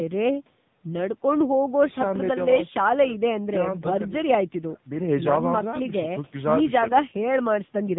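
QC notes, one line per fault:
Throughout: AMR narrowband mobile codec. The speech has nothing above 3.8 kHz and comes out buzzy and synthetic. The vocal-tract model gets only a few pulses per subframe, which fits a low AMR mode around 6.7 kbps. The call mic's high-pass trim sits underneath.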